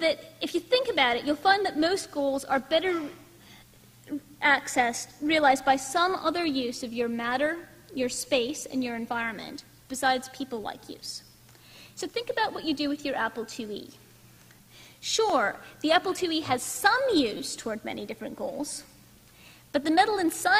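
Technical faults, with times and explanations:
15.30 s and 17.37–17.40 s, repeated buffer: a 5.8 ms chunk, likely from a 256-sample buffer, replays once, then four times, giving a click and then a brief buzz. The waveform shows identical copies with hard joins, and the spectrogram shows thin vertical lines.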